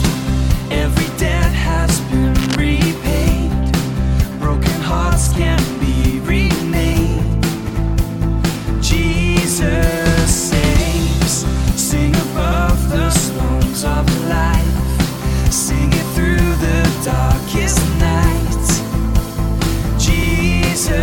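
From 2.35 to 2.56 s a burst of cable scratch noise sits over the sound: dense, uneven scratching about 10 dB below the signal, most likely a worn cable or connector being moved so its contact resistance fluctuates rapidly.

At 7.69 s, 12.52 s and 20.23 s the audio stutters as a 92.9 ms block plays twice, consistent with a single repeated frame each time. Each repeat stretches the timeline by 92.9 ms.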